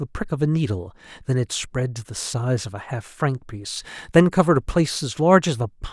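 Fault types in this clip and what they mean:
No technical faults can be heard in this speech recording. There is nothing to list for any fault type here.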